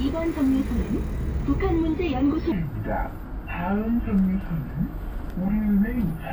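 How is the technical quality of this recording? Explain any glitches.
The recording has one clear fault: a section at the wrong speed covering the last 3.8 s of the clip.

From 2.52 s to the end, the audio plays at 0.717 times its original speed. The likely cause is a playback or editing stage running that segment against a mismatched clock, stretching it out. Because speed and pitch move together here, everything in that stretch drops by about five semitones and sounds noticeably deeper, slower and heavier than the opening 2.5 s.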